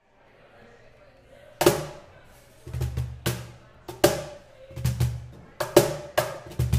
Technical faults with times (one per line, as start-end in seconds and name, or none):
none